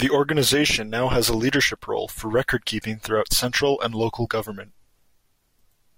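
No technical faults can be heard anywhere in the speech recording, with the signal continuous and steady throughout.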